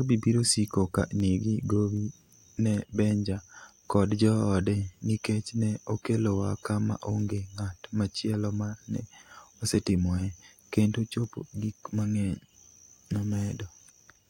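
Speech runs throughout, with word clock ticks from 0.43 s to 13.56 s. They come about every 0.7 s, around twenty in all. Each is a short, sharp click. The pattern points to a digital link read by a receiver running on its own clock. That clock drifts from the sender's by around 30 parts per million. Each time the two clocks slip past one another, a single sample is dropped or repeated, leaving a tick.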